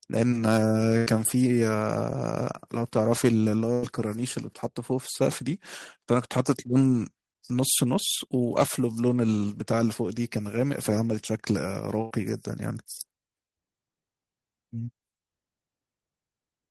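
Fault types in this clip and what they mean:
Burst of packet loss: A short run of audio never arrived in time, so the receiver kept the last sound going and let it fade before picking up again further along. It happens three times, at about 0.97 s, 3.73 s and 12.01 s. Each time you get roughly 90 ms of that held, dying-away fill, then the audio jumps ahead with about 60 ms of the original simply gone.
Jitter buffer speed-up: The buffer had built up more audio than it wants, so the receiver trimmed tiny pitch-period-sized slices over and over to catch up. From about 4.92 to 5.59 s the sound runs at around 105% speed, losing something like 40 ms in total. The pitch stays put, so it comes across as slightly rushed.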